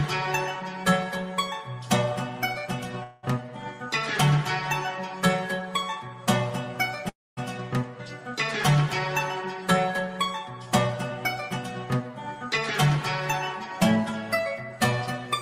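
Call audio freeze at 3.03–3.25 s and again at 7.09–7.39 s: the last sound is held as a fading buzz or hiss for 0.2 s and then 0.28 s, the second decaying into silence. The audio then resumes exactly where it stopped, with nothing lost but extra delay added. The likely cause is delayed packets draining the jitter buffer.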